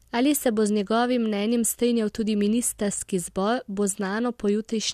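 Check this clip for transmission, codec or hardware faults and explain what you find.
No fault turns up anywhere in this speech recording. There is nothing here that needs explaining.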